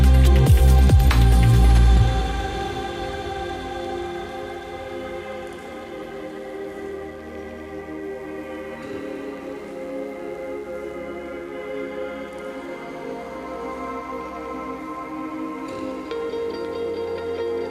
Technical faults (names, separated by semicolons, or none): mains buzz